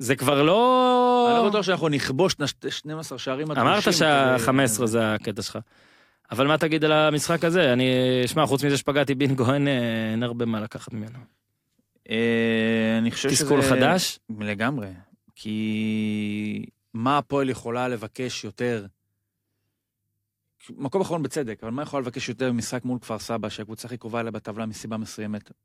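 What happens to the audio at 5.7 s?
Nothing goes wrong at 5.7 s; the speech runs through that moment intact, with no dropout, click or distortion to be heard.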